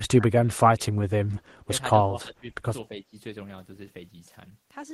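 The speech dips sharply and breaks into pieces at 0.0–0.25, 0.76–1.11, 2.01–2.55 and 2.88–3.14 s, falling by up to about 25 dB, with the last dip shallower. This is speech suppressed in double talk, likely an echo canceller muting the talker while both sides spoke.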